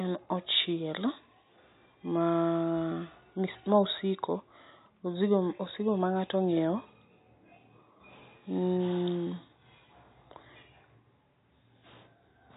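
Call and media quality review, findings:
No faults; room noise about 49 dB below speech.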